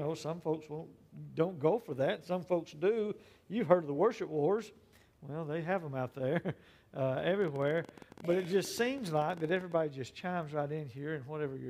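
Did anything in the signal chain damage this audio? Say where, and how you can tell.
Yes. A train of clicks runs from 7.42 to 9.73 s: around forty near-identical pulses at an uneven pace of about 17 per second, roughly as loud as the sound itself. The likely cause is electrical interference reaching the analogue wiring, or a faulty connection or power supply injecting pulses.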